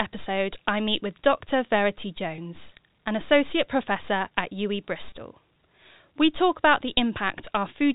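At 2.36 to 2.38 s and again at 5.10 to 5.12 s, packet loss with pitch repetition bridges a 20 ms gap. The receiver repeats the last pitch period, so the speech briefly holds a slightly buzzy tone instead of dropping to silence or clicking as a plain dropout would.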